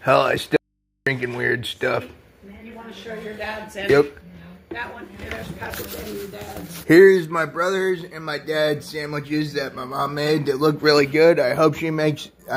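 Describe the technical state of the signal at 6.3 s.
At 6.3 s the signal is intact, with no audible fault at that point.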